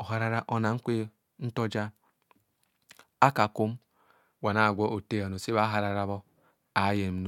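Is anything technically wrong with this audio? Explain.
No, there are no faults.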